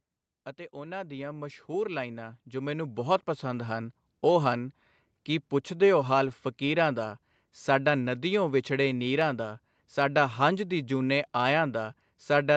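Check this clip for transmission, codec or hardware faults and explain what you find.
Two faults stand out in this call-path speech.

From 0.71 to 4.03 s, automatic gain rising: the gain control judged the input too quiet and raised it by about 14 dB. Voice and background swell together.

From 6.27 to 6.33 s, a lost packet rebuilt from error correction. Low-bitrate Opus copies, fitting two lost packets, fill roughly 40 ms. That stretch sounds rougher and noisier, with no gap.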